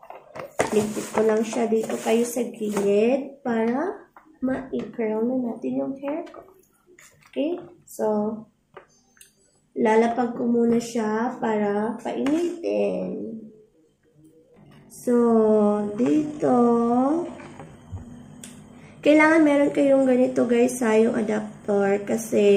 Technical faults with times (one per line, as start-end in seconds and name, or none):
12.24-18.10 time-stretched section